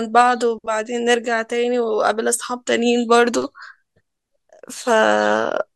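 A short stretch of speech, and nothing technically wrong turns up anywhere in it.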